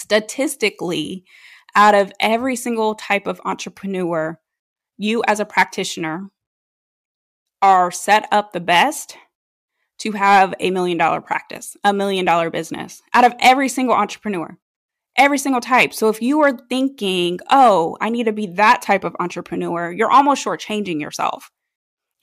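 No technical faults can be heard anywhere in the recording.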